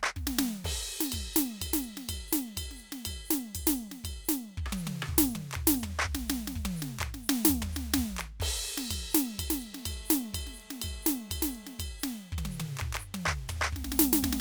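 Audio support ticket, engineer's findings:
GSM phone buzz, 9.73–11.83 s, music. Steady raspy 217 Hz buzz, dense harmonics, about 26 dB under the music, unrelated to it. Nearby 2G phone in a call; its 217 Hz transmit bursts rectified by the audio input stage.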